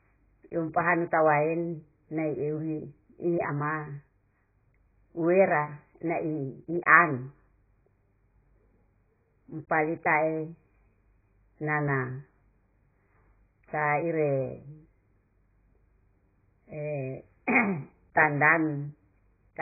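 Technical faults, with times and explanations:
Throughout, AAC compression: the speech is dull and smeared, with nothing above 2.5 kHz and a warbling, fizzy texture on sibilants. This heavy damage likely comes from AAC-LC at a very low bitrate, fitting 12 kbps, which forces a low cut-off and coarse quantisation.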